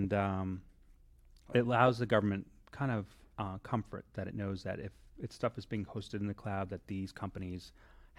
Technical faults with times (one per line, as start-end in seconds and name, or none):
none